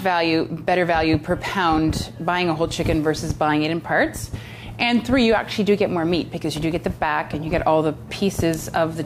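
From 4.20 s to 5.43 s the sound abruptly slows by about 5.3 percent and drops in pitch by 95 cents, just under a semitone, then snaps back to its original speed and tuning. Held tones make the sag most obvious. This is a drift correction step, likely from clock-matching software that changed the playback rate in a single jump to rebalance its buffer, then restored the nominal rate once the buffer level had recovered.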